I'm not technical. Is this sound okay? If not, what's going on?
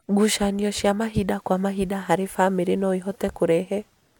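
Yes, nothing wrong can be heard anywhere in this speech recording.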